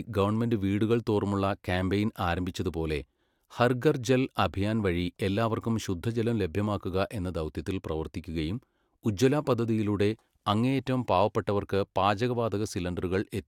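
Nothing stood out as a technical fault on listening through this speech recording.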